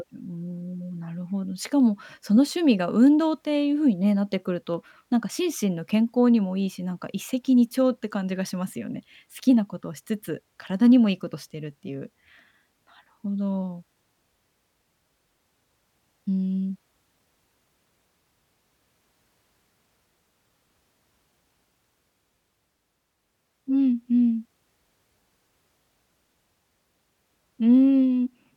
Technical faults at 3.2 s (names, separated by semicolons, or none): dropped samples